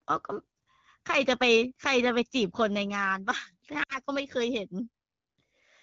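Lost AMR speech frames at about 3.83 to 3.99 s in this speech clip: a gap of about 60 ms, which fits three lost frames, where the wideband decoder repeats the last good settings with falling gain, so the sound smears briefly and fades.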